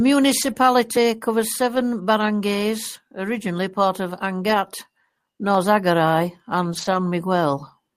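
Lost packet rebuilt from error correction, 0.41 to 0.51 s: audio went missing, but the next packets carried low-bitrate copies of it. The decoder played those copies, so about 60 ms of speech comes through unbroken but coarser and noisier, which fits several separate packets being replaced.

Short concealed packet loss, 0.53 to 0.57 s: about 20 ms never arrived, and no copy was available. The decoder extended the preceding sound to fill the hole and then blended back into the real signal. The result is a brief smear or wobble.

Lost packet rebuilt from error correction recurs three more times. At 1.75 to 1.81 s, just before "barangays originally part of", about 40 ms is played from the lower-quality copies and sounds rough. At 4.49 to 4.55 s, just after "barangays originally part of", another 40 ms has the same grainy texture. At 6.73 to 6.95 s the longest stretch, about 120 ms, is rebuilt this way, so the noisy, degraded quality lasts longer.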